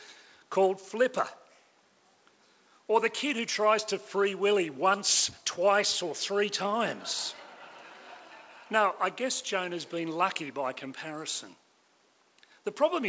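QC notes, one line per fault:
No faults found; the audio carries the usual coding texture of a WebRTC call path, with the spectrum stopping at 8 kHz, consistent with the G.722 wideband codec at 64 kbps.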